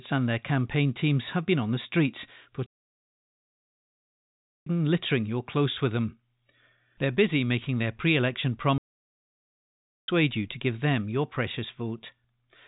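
Playback stalls at 2.66 s and 8.78 s: after "been on the streets" the speech cuts to silence for 2.0 s, resuming at "littering your close with"; after "making their pre election" it stops for 1.3 s before "you to give them". The likely cause is the player starving of data or its thread blocking, while the telephone-band G.711 sound carries on either side unchanged.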